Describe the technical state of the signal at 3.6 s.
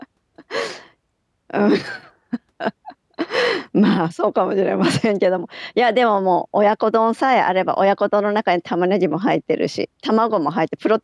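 At 3.6 s the speech signal is intact, with no dropout, clipping, glitch or other fault audible at that point.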